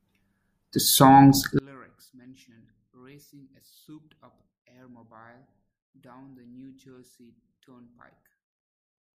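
From 1.59 s to the end, the speech collapses to a faint residue, roughly 32 dB below its earlier level, with the voice and background almost gone. The likely cause is one channel inverted: with one stereo side's polarity reversed, the material common to both channels cancels when they are summed to mono, so only the small difference between left and right survives, heard as a weak trace of the speech.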